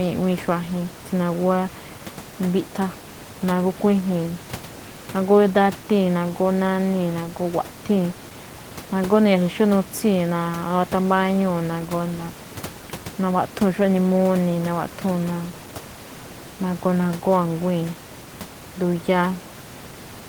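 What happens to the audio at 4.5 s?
At 4.5 s the speech carries on intact, with only the room's own background noise sitting about 16 dB below it.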